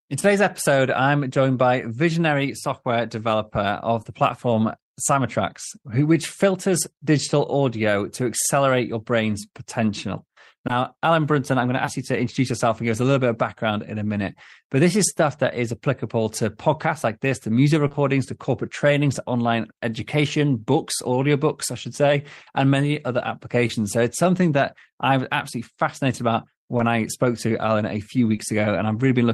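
Short concealed packet loss: speech packets arrived too late at 4.03, 10.67, 11.85, 17.87, 17.91, 23.67, 26.77 and 28.35 s, and the receiver filled each gap by extending the preceding sound. Each fill is heard as a brief smear or wobble.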